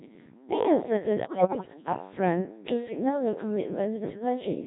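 Speech here has been squeezed through the Codec 2 vocoder at 1.3 kbit/s, so the original waveform is gone and the voice is rebuilt at the decoder from sine waves driven by pitch, voicing, energy and spectral-envelope parameters. The damage is heavy: the whole clip sounds robotic and buzzy, with the natural texture of the voice replaced by a synthetic, hollow tone. From 1.24 to 1.74 s, bit errors on digital voice radio corrupt a run of frames, the error rate being roughly one bit in ten, about what reception at the edge of coverage would produce. Because each bit in so low a rate steers the pitch, level, voicing or spectrum of an entire frame, the voice lurches in pitch and loudness, shifts tone colour abruptly, and breaks into warbling, bleeping gibberish for that half second.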